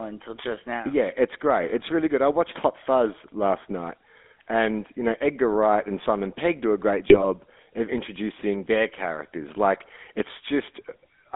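The clip is speech, band-limited to about 250 Hz to 3.6 kHz throughout. It carries plainly audible GSM full-rate codec damage, a buzzy, gravelly roughness. The sound fits the 13 kbps GSM coder, which models the vocal tract and drives it with a coarse pulse excitation. From 7.10 to 7.25 s the speech breaks up. These are GSM bit errors, which fit six corrupted frames on a weak link. Flipped bits corrupted the decoder's filter, pitch or gain values, so the spectrum or level went wrong frame by frame.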